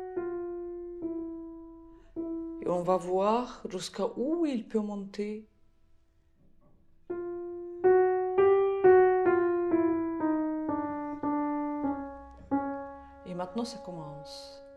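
No technical faults can be heard anywhere in this audio. Nothing in it calls for a timestamp or a cause.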